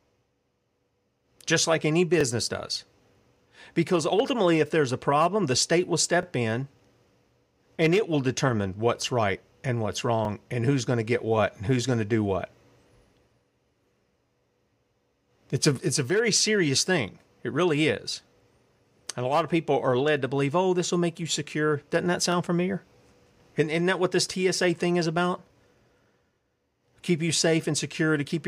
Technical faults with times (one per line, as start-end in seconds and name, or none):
2.21-2.23 overlapping chunks
6.23-6.25 overlapping chunks
10.25-10.27 overlapping chunks
22.32-22.34 overlapping chunks